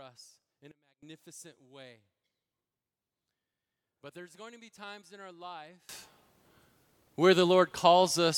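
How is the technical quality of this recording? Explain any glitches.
The quality is flawed by two sudden gain jumps. At 0.72 s the level drops by about 24 dB, then returns at 1.03 s. From 5.89 s to the end it rises by about 24 dB. Speech and background noise shift together, likely from a gain change applied without a ramp.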